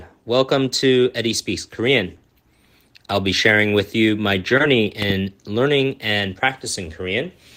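Speech with two faults. From 4.57 to 4.62 s there is short concealed packet loss. About 20 ms of audio arrived too late, and the receiver extended the preceding sound to cover it, leaving a brief smear. At 5.02 to 5.13 s a loud pop occurs as two sharp clicks, well above the speech level. The likely cause is a sudden voltage pulse from a plug, switch or static discharge.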